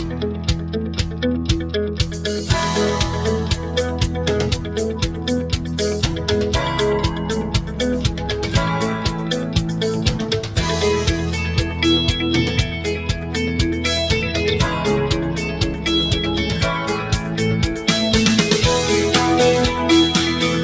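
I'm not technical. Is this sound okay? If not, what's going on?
No. A noise suppressor meant for speech was left on throughout, treating held sounds and their tails as noise. They dip, so the audio pumps and thins out.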